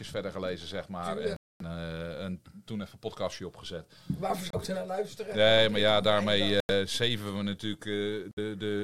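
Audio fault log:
1.36 to 8.39 s, Bluetooth stalls: the sound drops to silence at 1.36 s for about 240 ms, at 4.50 s for 28 ms, at 6.60 s for 90 ms and at 8.31 s for 58 ms, then carries on. It's likely the headphone buffer running dry while interference held up packets.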